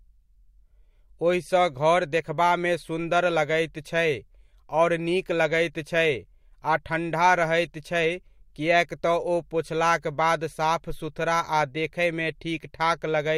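At about 7.64 to 7.66 s in the speech there's a corrupt frame decoded: a single compressed frame got flipped bits, and the decoder played it anyway. Misread gains and codes put energy in the wrong places, so you hear a short chirpy blip, peaking around -25 dBFS.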